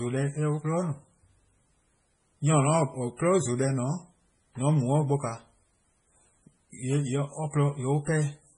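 From start to finish, the speech has a watery, swirling texture, and s sounds chirp metallically. Nothing is heard above 10.4 kHz. This is likely heavy MP3 compression, consistent with a bitrate near 24 kbps, where weak frequency lines flicker between frames and attacks smear.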